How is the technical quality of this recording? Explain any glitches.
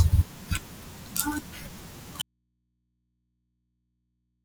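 The input signal was likely lost at 2.22 s while the path after the break stayed live, causing an audio dropout to a faint residue that runs to the end. The speech cuts off abruptly mid-flow, leaving only mains hum roughly 45 dB below the speech.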